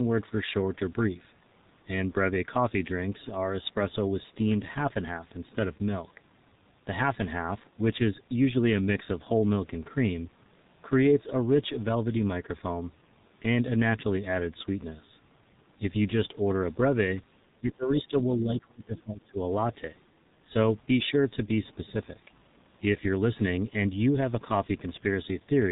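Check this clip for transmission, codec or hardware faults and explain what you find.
Two faults are audible.

G.723.1 codec, throughout: its 30 ms frames and heavy compression, consistent with about 6.3 kbit/s, cut everything above 4 kHz, leaving muffled, hoarse speech with smeared consonants.

Speech suppressed in double talk, 17.6 to 19.4 s: the level sinks by around 20 dB in pieces, most likely from an echo canceller ducking the talker while both sides spoke.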